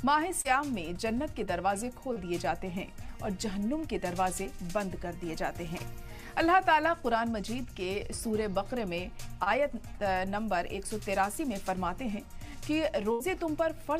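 Short concealed packet loss occurs at 0.41, 2.13, 5.78 and 9.44 s: 20 to 40 ms of audio fails to arrive, and the receiver extends the preceding sound across the hole before crossfading back, leaving a brief smear or wobble each time.

A burst of packet loss follows at 13.12 to 13.22 s, where about 80 ms goes missing. Concealment stretches the last sound over roughly 77 ms while attenuating it, so a held buzz or fading hiss stands in for the lost audio before playback resumes further on.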